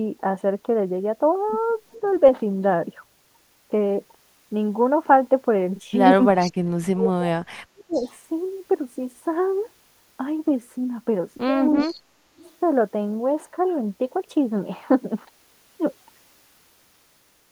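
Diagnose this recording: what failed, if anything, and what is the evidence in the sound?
Faint copies of the speech return 363 ms late at 1.91, 6.38, 7.93, 11.77 and 12.4 s. This is likely an echo leak, where call processing's echo canceller let residual loudspeaker pickup through.

The speech dips sharply, by up to about 35 dB, at 6.17, from 6.92 to 8.04, and from 11.85 to 12.39 s. This is likely speech suppressed in double talk, where the canceller ducked overlapping talk.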